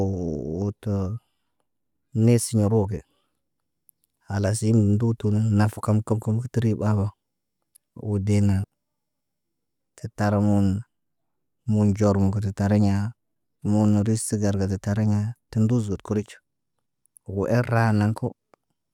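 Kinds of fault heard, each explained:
No faults are audible anywhere in this recording.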